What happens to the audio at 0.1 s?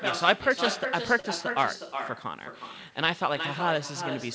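With no echo canceller, the far end's loudspeaker leaks back through its microphone, so throughout the clip the speech is shadowed around 400 ms later by a thinner copy about 8 dB quieter.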